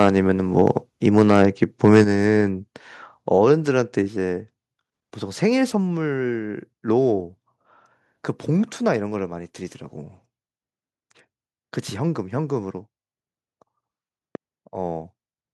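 From the first instant the speech sounds harsh and crackly. Microphone overload is heard from 0.00 to 0.08 s, again from 0.59 to 0.71 s, and longest from 1.17 to 2.01 s. The peaks run about 5 dB past the converter's limit in the first and third stretches and about 2 dB in the second. The cause is likely an input level set too high, so the loudest syllables hit the converter's ceiling and their tops are flattened. A few percent of samples are clipped at most. The grit follows the loud syllables rather than landing as a separate event, which sets it apart from a pop.

The microphone volume is stepped down at 1.02, 2.04, 4.08, 5.70 and 8.97 s. Each time, the speech and the background drop together in a single abrupt step with no added distortion. The largest drop, about 6 dB at 2.04 s, comes just after the longest clipped stretch. The others are about 1 to 2 dB. This is likely the call software lowering the device's input level after it detected overload. 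Unlike a gradual fade, each change is instant and the new level then holds.

A loud pop lands at 14.35 to 14.37 s. It is a single sharp click, roughly 10 dB above the surrounding sound, and the speech carries on unbroken underneath it. The likely cause is a voltage spike from a plug, a switch, static or a driver glitch. It is one brief transient with no level change afterwards, which distinguishes it from both the clipping and the volume steps.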